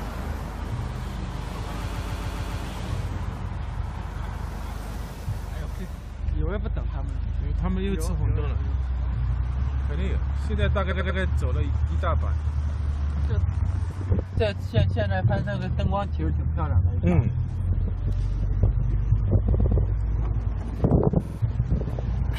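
At 1.92 to 2.61 s, repeated frames make the sound stutter. A 139 ms block plays five extra times. The same fault returns at 10.90 to 11.18 s, with a 93 ms block repeated three times. At 19.54 to 19.77 s, a 116 ms block plays twice more. At 21.24 to 21.37 s, a 46 ms block repeats three times. The stutters add about 1.3 s in total.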